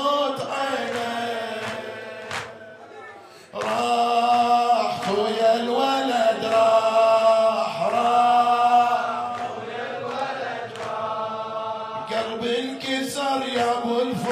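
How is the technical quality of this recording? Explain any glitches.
The recording holds steady quality until a single fault near the end. From 10.94 s to the end, the adaptive stream switches to a lower bitrate: the treble abruptly thins, with nothing above about 14.9 kHz, and codec artefacts grow. A slowed connection prompted the player to fetch a leaner encoding, which suggests a drop from roughly 96 kbit/s AAC to about 24 kbit/s HE-AAC. The change is instant, with no gap.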